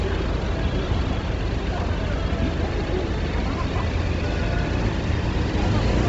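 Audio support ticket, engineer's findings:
Grainy, breathy hiss on the upper band throughout. Nothing above 7.8 kHz. Likely Bluetooth LC3 compression with heavy codec damage, fitting about 24 kbps and 7.5 ms frames. Upper spectrum zeroed, then noise-filled. Unlike a plain low-pass, the top band keeps a rough texture rather than going quiet.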